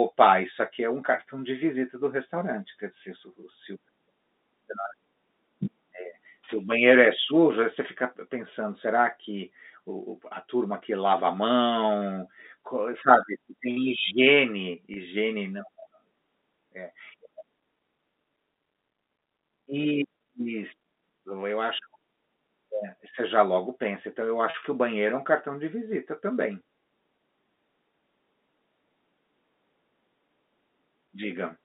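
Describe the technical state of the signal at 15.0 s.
Just before 15.0 s, from 14.94 to 14.96 s, one stretch of data never reached the receiver, a gap of 20 ms that fits a single lost packet. To cover it, the receiver applied packet loss concealment with pitch repetition, replaying the last pitch period of the sound it had already decoded. Because the gap is this short, the repetition plays out in full rather than fading to silence, and it comes across as a brief held, slightly buzzy blip in the narrowband telephone-coded audio.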